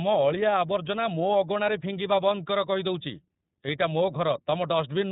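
iLBC codec damage runs throughout this speech clip: nothing above 4 kHz survives, and frame-by-frame excitation coding, fitting 30 ms frames near 13.33 kbps, leaves it rough and synthetic.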